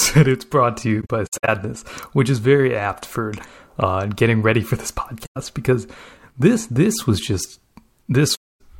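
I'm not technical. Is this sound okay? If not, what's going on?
No. The problem is AAC frame loss with muting: bits of the compressed audio went missing and were replaced by softly faded silence. It happens right after "it's brought to", with patchy dropouts from 1.01 to 1.49 s, then after "getting ready for this" from 5.25 to 5.37 s, and again from 8.35 to 8.61 s.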